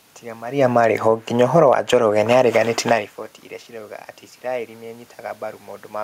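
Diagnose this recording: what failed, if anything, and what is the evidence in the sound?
The fault sits in call processing: the automatic gain is falling. From 0.59 s to 2.54 s the level eases down by about 3 dB, and the room noise sinks along with the speech. That shared drop is what separates it from a talker moving away, as happens near 0.5 s and again near 3 s, where only the voice changes while the background holds steady. Here the gain control judged the input too loud, or its background noise too strong, and pulled its gain back gradually.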